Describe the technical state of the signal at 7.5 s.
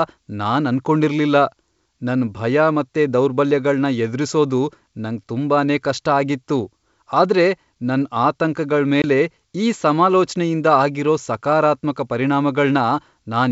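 At 7.5 s the speech is intact, carried cleanly through G.722 wideband telephone coding at 64 kbit/s with no fault present.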